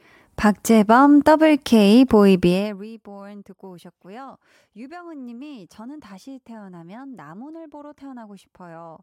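Nothing stood out as a technical fault on listening to this speech recording.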